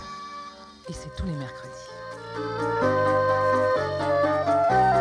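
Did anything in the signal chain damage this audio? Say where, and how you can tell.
No, nothing in the chain audibly damaged this audio, and no stage leaves any trace a listener can point to.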